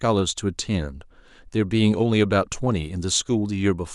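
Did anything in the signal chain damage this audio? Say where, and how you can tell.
No, nothing audible in this speech points to damage at any stage of the signal chain.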